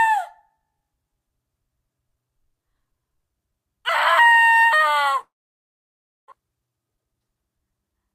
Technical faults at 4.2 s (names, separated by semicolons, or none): none